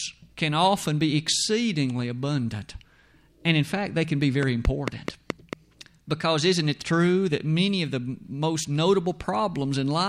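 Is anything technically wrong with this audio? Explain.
Yes, there's one problem. Right after "fact they can be", from about 4.43 to 5.54 s, a train of clicks runs over the speech: around seven sharp ticks at a steady 4.55 per second, each much the same shape and jumping well above the level of the voice. Regular, identical pulses like that are likely interference from nearby equipment or a faulty connection or power supply, injecting a spike on a fixed cycle. You hear it as popping laid on top of the speech.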